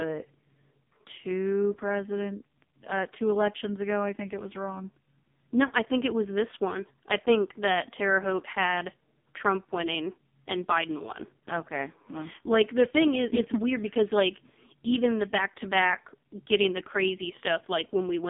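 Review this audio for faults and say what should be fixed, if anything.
AMR narrowband mobile codec damage runs through the whole clip. The speech sits in a line band of 200 Hz to 3.6 kHz with nothing above 3.6 kHz, and it has a heavy buzzy, synthetic quality. That comes from the vocal-tract model being driven by too few pulses per frame, which fits the lowest AMR-NB mode, around 4.75 kbps. A plain band-limiting filter would sound muffled but natural, not robotic. Route the call over a wideband or higher-rate codec mode.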